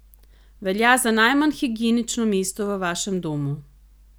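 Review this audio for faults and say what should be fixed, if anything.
No faults were found; nothing needs fixing.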